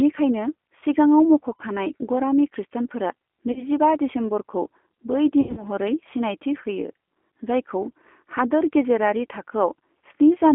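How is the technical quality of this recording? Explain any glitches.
The technical quality is limited: the whole recording carries narrowband codec damage, and there are four short concealed dropouts.

G.729 codec, throughout: The speech passes through a narrowband telephone line, about 250 Hz to 3.4 kHz, coded at 8 kbit/s. The codec rebuilds each 10 ms frame from a vocal tract filter, a pitch predictor and a few pulses instead of the real waveform. That gives the plainly audible rough, slightly synthetic texture. On a spectrogram, energy stops sharply near 3.4 kHz, and harmonics look smeared and grainy.

VoIP packet loss concealed by the speech codec, at 1.57–1.62 s, 3.52–3.63 s (just before "दिसेम्बरखौ बै"), 5.41–5.65 s (just after "दिसेम्बरखौ बै") and 8.49–8.51 s: Audio went missing, and the decoder filled each gap by extending its last pitch and filter while lowering the gain. The gaps are about 40 ms, 40 ms, 140 ms and 20 ms. 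The third one is scattered over 160 ms, with a longest run of 80 ms, which fits several lost 20 ms packets. Each gap sounds like a brief stretched buzz or hiss that fades, and the sound stays weak for a moment afterwards. On a waveform, the envelope sags there. On a spectrogram, a few flat, repeated harmonic bands replace the normal movement.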